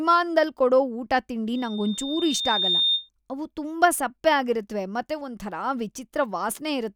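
Speech, with a loudspeaker feedback squeal running from 1.55 to 3.09 s. A single tone at 3.6 kHz swells over roughly a second until it's sitting about 5 dB above the talker, then cuts off just before "ಅವು ತುಂಬಾ ಸಪ್ಪೆ ಆಗಿರತ್ವೆ". That's the classic loop where the mic hears its own PA and the gain at that one frequency tips past unity, so it keeps feeding itself until the loop is broken.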